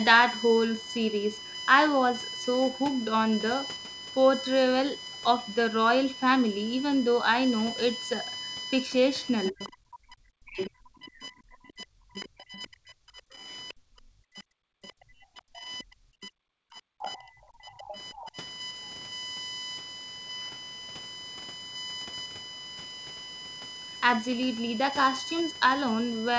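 A USB whine runs through the whole recording: a steady tone at 1 kHz, loudest at its third harmonic near 3 kHz, sitting only about 10 dB below the speech. The bus draws current in regular 1 ms frames, and that ripple reaches the audio through power or ground. Its fixed kHz pitch separates it from mains hum, whose pitch is far lower. It also stays the same instead of following the talker the way codec noise does.

From 9.5 to 18.37 s the talker is likely suppressed in double talk. Over about 7 s in total, the voice ducks, thins out and breaks into pieces, dropping at worst by about 40 dB. The echo canceller cannot tell the near voice from loudspeaker echo while both sides talk, so it turns everything down. Packet loss would sound different, with short gaps unrelated to the far side speaking.

Just before and inside that stretch, the other side's voice likely leaks through at 9.46–9.72, 10.68–12.43, 13.68–13.74, 14.82–14.92, 15.78–16.28, 17.02–17.17 and 17.78–18.31 s. 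It is a second voice, about 10 to 30 dB below the talker. This residual echo is a separate voice with its own timing, unlike room reverberation, which only smears the talker's own sound. The G.722 call path cuts everything above 8 kHz, so the whine's harmonics and the leaked voice stay within that band.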